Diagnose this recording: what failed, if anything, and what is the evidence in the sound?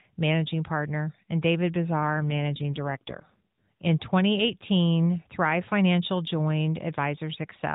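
The fault is an AMR rate drop at the codec and network stage. From 1.99 to 3.62 s the speech turns rougher and more synthetic, with no gap and no band change. This fits the mobile link forcing the AMR-NB encoder down from about 12.2 to 5.9 kbps and then restoring it.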